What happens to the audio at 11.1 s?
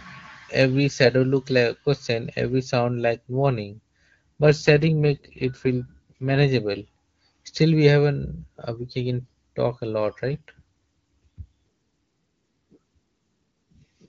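At 11.1 s the audio is inside an AMR rate drop that runs from about 10.29 s to 13.77 s. The link forces the codec down to a lower mode so more bits go to error protection. The roughness fits a fall from the top AMR-WB rate to around 8.85 kbit/s. Speech turns raspy and synthetic. A spectrogram keeps the same bandwidth with no gap, but harmonics look smeared and noisier, and the waveform stays continuous.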